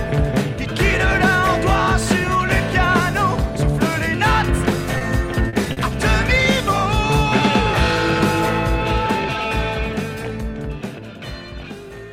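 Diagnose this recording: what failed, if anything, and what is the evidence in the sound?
Network and jitter buffer: a short stall from a late packet at 4.98 to 5.04 s and 5.73 to 5.80 s. The sound holds for 30 ms, then 40 ms, and resumes without loss. On a spectrogram the harmonics run flat and stretched, and later audio shifts by the same amount.

Network, concealed by the decoder: a short concealed packet loss at 5.49 to 5.56 s. About 40 ms of real audio is gone, replaced by an extrapolated continuation. On the waveform it looks like a smoothed, repetitive patch that crossfades back; the spectrogram shows blurred, slightly smeared detail.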